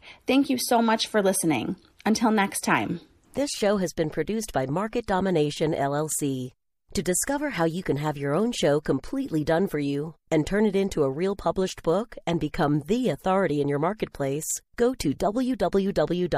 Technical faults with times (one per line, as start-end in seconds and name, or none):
14.99-15.20 pre-echo